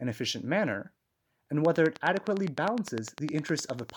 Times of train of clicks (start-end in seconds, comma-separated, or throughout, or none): 1.65-3.91